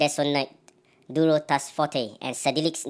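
Throughout, wrong sample rate: the speech runs 1.38 times fast and about 5.5 semitones high, which fits 16 kHz audio played at 22 kHz. The spectrogram shows harmonics stretched upward and events squeezed in time.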